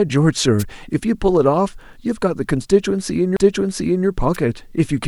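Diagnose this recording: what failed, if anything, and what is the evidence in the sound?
Wireless microphone noise hits occur at the radio link ahead of the converter, from 0.59 to 0.64 s and from 4.33 to 4.37 s. Each is a short swish of static lasting about 50 ms and 36 ms. When reflections cancel the FM carrier, the receiver's noise floor rises and breaks through the speech. The speech timeline stays continuous across both bursts. That continuity separates these hits from a dropout or skip, where material would be missing or misplaced.

A CD skip occurs at the playback stage at 3.37 s. A very brief mute is followed by the speech resuming from a different point. A knock or disc flaw made the laser jump to another turn of the spiral, so the player muted briefly and then read from the new position. Unlike the wireless hits, there is no static. The evidence is the sudden discontinuity in the speech itself rather than added noise.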